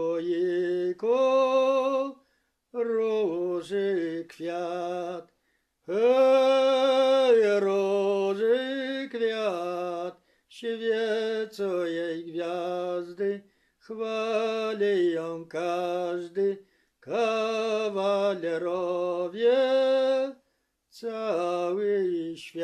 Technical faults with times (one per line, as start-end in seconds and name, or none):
none